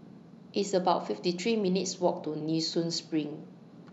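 No technical faults can be heard anywhere in the speech recording, and the signal stays intact and continuous throughout.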